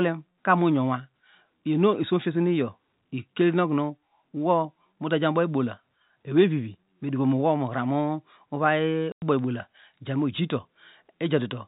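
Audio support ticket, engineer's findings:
Dropout at 9.12 to 9.22 s: 100 ms of dead silence with hard edges. That's packet loss filled with silence. The receiver had nothing to play, so it inserted zeros. The length fits five 20 ms packets. The band stopping at 4 kHz is just the G.711 telephone coding.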